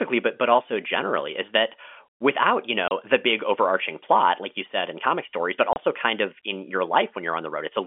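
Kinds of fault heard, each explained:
Packet loss filled with silence: Audio packets went missing, and the receiver played silence instead. Two 30 ms holes cut the speech, at 2.88 s after "is that without you" and 5.73 s after "in comic stories but". Each fits one lost packet.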